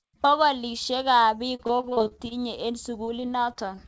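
A speech clip carried over a call link, with two bursts of repeated packet loss (robotic sound). From 1.56 to 2.33 s, about a dozen short dropouts, the longest about 37 ms, are each patched by stretching the previous sound, so roughly a third of that span is concealment. The result is choppy, with pieces missing. From 3.05 to 3.79 s, a few shorter holes, up to 22 ms, make the same effect milder. On a spectrogram, these stretches show smeared, repeated frame patterns and hard vertical seams where the real signal resumes. The waveform shows copied cycles in place of fresh detail. The band stops at 8 kHz, which fits a G.722 call codec at around 64 kbps.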